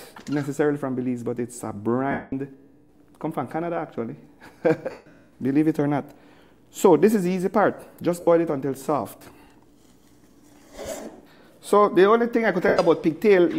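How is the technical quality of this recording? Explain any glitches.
The recording has four dropouts from lost LE Audio frames. They occur at 2.11 s for 210 ms, 4.91 s for 150 ms, 8.20 s for 68 ms and 12.68 s for 105 ms. At each gap the LC3 decoder repeats the last spectrum with random signs, in steps that fit 7.5 ms frames. Tones smear into noise and fade away.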